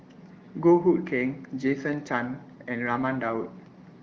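The speech carries no audible technical faults, and it has the sound of AMR wideband (HD Voice) coding at a higher rate, consistent with about 18 kbit/s, where codec damage is at most faint.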